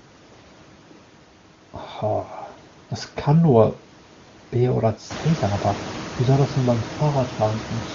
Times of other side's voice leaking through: none

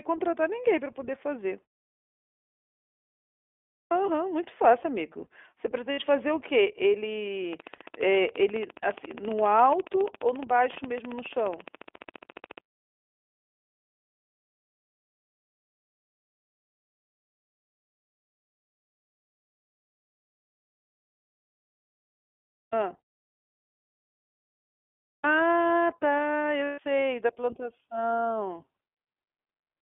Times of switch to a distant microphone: none

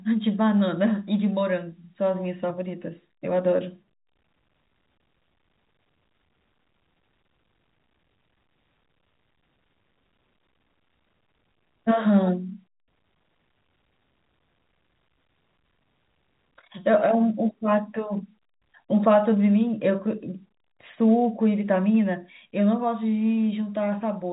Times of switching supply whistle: none

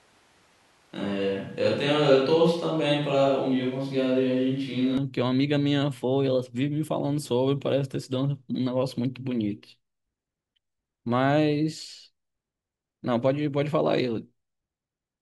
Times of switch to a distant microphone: 0.00-4.97

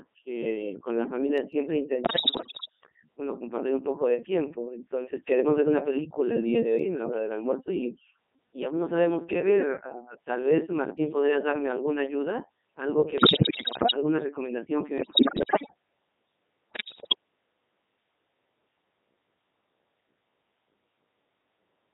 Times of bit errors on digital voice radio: 2.04-2.69, 13.18-13.94, 14.98-15.74, 16.71-17.15

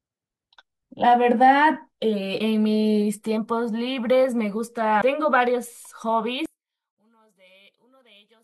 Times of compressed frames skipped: 5.00

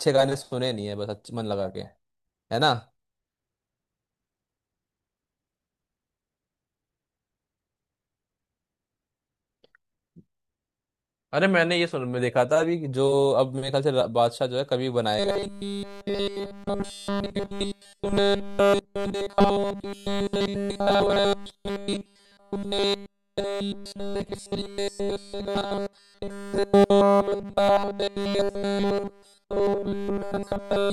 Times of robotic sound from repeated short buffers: 15.19-30.93

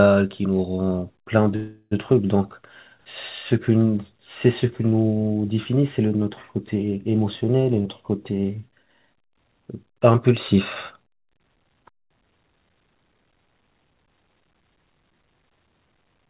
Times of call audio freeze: 1.56-1.93

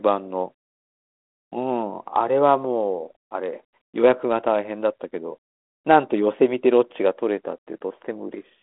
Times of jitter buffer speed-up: none

